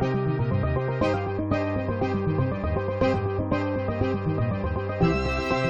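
Sample clock jitter runs through the whole clip. The converter's clock wavers, so each sample lands a little early or late. The timing error is a few microseconds. Steep parts of the waveform suffer most, since a timing slip there gives a larger level error. The result is a fine hiss and roughness about 35 dB below the sound. It swells on loud, bright passages. It drops away in the quiet gaps.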